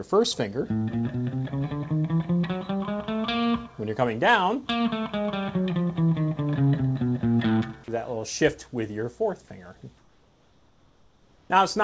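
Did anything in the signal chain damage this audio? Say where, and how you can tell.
Yes, at the call-processing stage. At 7.84 s there's a 40 ms spot where the sound gives way to flat, steady noise before picking back up, and roughly 20 ms of real material goes missing. That's sound dropped by the voice detector: it most likely judged a quiet stretch to be background, stopped sending, and the receiver filled the hole with comfort noise until the detector triggered again.

The same DTX path shows up from 9.98 to 11.50 s, where the background is comfort noise in place of the real thing. The room tone, sitting about 36 dB under the loud parts, turns smooth and featureless and drops by about 3 dB. That's likely the sender sending only occasional noise updates while the receiver synthesises a rough spectral match. The top end stops around 8 kHz throughout, which fits a wideband call codec like G.722.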